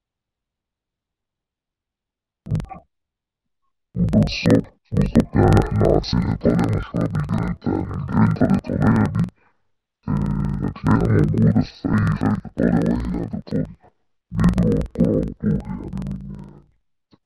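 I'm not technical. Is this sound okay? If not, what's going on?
No. Throughout the clip there's a fault called interleaved audio read as planar. The playback system receives the left and right channels woven together, sample by sample, but reads each chunk of about 46 ms (which fits a 2048-sample block) as if one half were all left and the other all right. Each half then plays at half speed, so the speech sounds an octave lower, doubled and choppy, with a rough flutter about 21.5 times a second.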